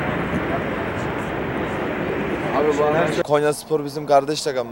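Video or display buzz runs throughout: a screen or video cable couples into the audio, giving a 59.94 Hz field-rate buzz with hash and a faint 15.7 kHz line tone, well below the signal.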